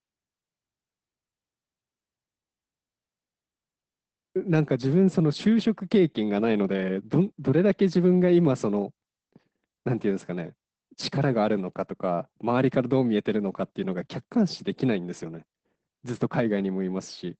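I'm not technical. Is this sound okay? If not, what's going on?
No, not quite. All the way through, the speech sounds muffled and a little hoarse, with a faintly robotic edge and nothing crisp above about 8.5 kHz. That's Opus voice compression squeezing the recording hard, trimming the high end and roughly approximating the voice's texture.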